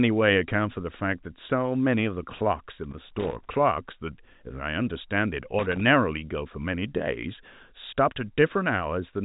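Loose connector crackle occurs from 2.84 to 3.49 s and again from 5.59 to 5.81 s: a worn contact intermittently breaks the speech path, producing irregular scratchy bursts over the telephone-band audio.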